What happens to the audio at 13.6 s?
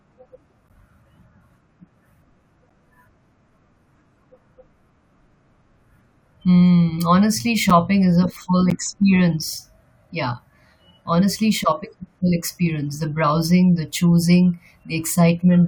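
Nothing goes wrong at 13.6 s; the speech carries on intact through that moment, with no dropout, click or distortion.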